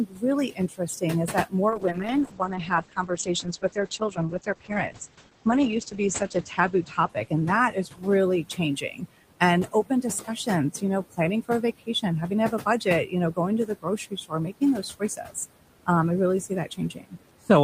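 The clip is speech, with room noise sitting about 14 dB below the voice. Noise suppressor artifacts run through the whole clip. The suppressor pulls the background down by about 18 dB, frame by frame, wherever it judges the noise steady. So the room noise sinks in the gaps and swells back under the talking. Speech cut by the noise suppressor follows from the same processing. From 0.06 s to 15.88 s, just before "um I really", soft parts of the speech are mistaken for noise. They drop by as much as about 18 dB. Across that stretch, roughly three seconds of speech in total are affected. Consonants and word endings sound swallowed. It happens again from 16.49 s to 17.5 s, just after "um I really". This time only a fraction of a second is turned down. A call bitrate drop starts at 1.71 s and lasts until 9.11 s. The encoder was evidently told to spend far fewer bits. The sound suggests a fall from around 32 kbps to around 9 kbps. 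The audio bandwidth shrinks from 16 kHz to 8 kHz, so the top end goes muffled. The coarser coding adds a rough, watery edge. The worst of it lasts about 4.3 s before quality climbs back.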